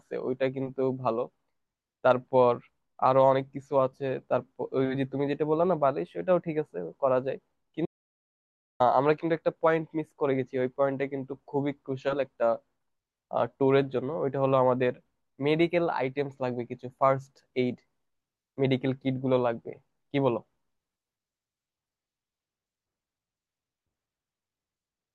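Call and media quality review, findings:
Audio dropout to silence, 7.86 to 8.80 s. Speech cuts off mid-flow into total silence with no room tone, then resumes abruptly after about 0.95 s. Likely cause: input to the capture chain lost (device disconnect, link failure or mute) while the recorder kept writing zeros. Speech in the gap is unrecoverable.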